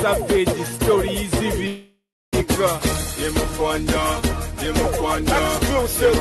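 A call audio freeze runs from 1.67 to 2.35 s. The sound stops advancing and the last moment is stretched into a fading buzz or hiss, which settles into about 0.33 s of silence before playback resumes exactly where it left off. Nothing is lost, but everything after arrives about 0.65 s late. The likely cause is delayed packets draining the jitter buffer, with the receiver concealing the wait. The call path's coding noise and top end near 12 kHz point to an Opus codec.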